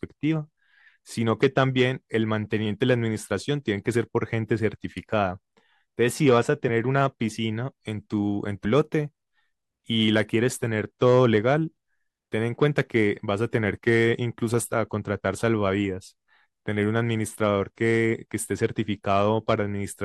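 At 8.64 s the speech jumps forward with compressed frames skipped: about two whole frames, around 40 ms of audio, never reach the output, consistent with frames of roughly 21.3 ms. Unlike a dropout, there's no gap of silence, only a tiny jump in the speech's timing with a brief blip or click at the join.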